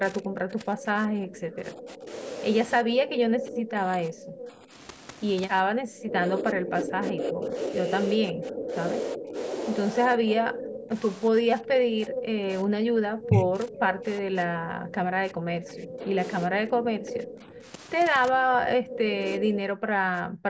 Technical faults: speech suppressed in double talk; echo leak

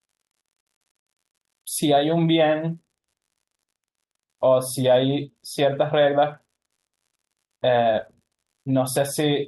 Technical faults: unreliable data bit

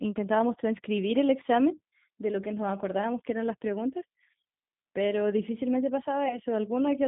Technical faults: G.729 codec; VoIP packet loss concealed by the speech codec

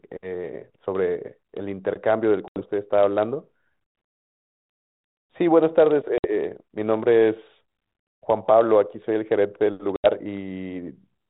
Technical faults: packet loss on an ADPCM call

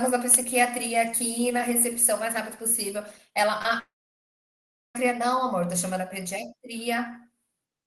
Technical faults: short concealed packet loss; long network dropout

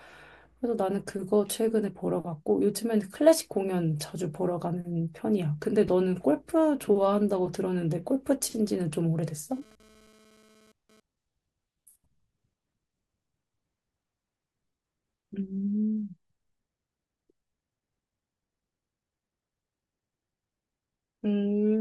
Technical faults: GSM phone buzz

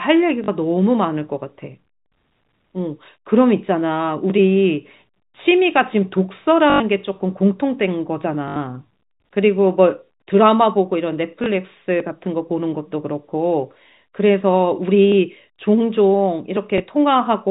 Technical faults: packet loss with last packet repeated

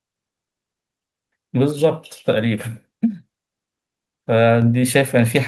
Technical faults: microphone volume stepped up

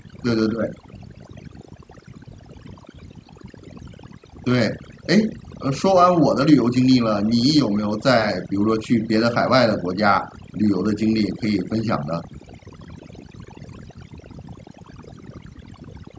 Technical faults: overdone noise removal

